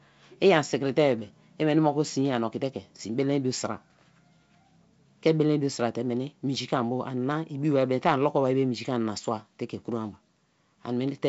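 Nothing stood out on listening to this speech, which has the band-limited sound of G.722 wideband telephone coding, with nothing above about 7.7 kHz.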